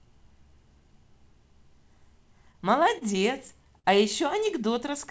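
Between 2.52 and 3.86 s, packets arrived late or too slowly, so the jitter buffer repeatedly ran dry. The receiver bridged each of seven gaps, the longest 52 ms, by extending the last sound, giving repeated stalls (stutter): speech drags and hiccups but loses nothing.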